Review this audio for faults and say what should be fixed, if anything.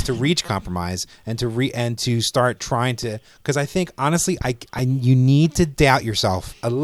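Repeated buffer at 0.46 to 0.48 s after "to reach", at 3.03 s after "and to start trying", and at 4.78 s after "i think honestly I". New audio arrived late, so the last 5.8 ms slice, which fits a 256-sample buffer, replayed with hard joins. In the first event it sounds four extra times, giving a brief buzz. In the other two it sounds once more, giving a click. Keep the output buffer fed on time, for example with a larger buffer or a higher-priority audio thread, so that it never has to replay.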